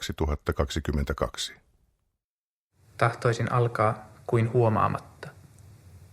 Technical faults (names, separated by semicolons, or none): none